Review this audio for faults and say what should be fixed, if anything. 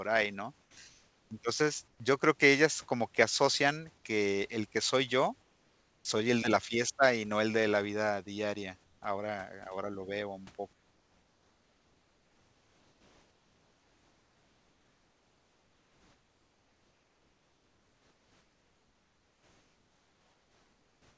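Sound dropped by the voice detector at 0.62 to 0.77 s: about 80 ms of speech vanishes into 150 ms of steady noise, likely because the sender's detector mistook the quiet sound for background and stopped transmitting until it triggered again. Lowering the detector's threshold or adding hangover time would prevent this.

Comfort noise in place of the background at 0.89 to 1.31 s, 1.88 to 2.00 s (just before "yo creo que ellas"), 5.42 to 6.05 s (between "el que soy yo" and "el de la fiesta"), 8.84 to 9.02 s (after "de la vida diaria"), and from 10.73 s to the end. The real background, about 40 dB below the loudest speech, becomes flat, featureless hiss, likely synthesized by the receiver during discontinuous transmission. It is level in the first gap, about 3 dB quieter in the next three, and about 4 dB quieter in the last. The G.722 call path carries nothing above 8 kHz. Disabling discontinuous transmission, or matching the comfort noise's level and spectrum more closely, would prevent this.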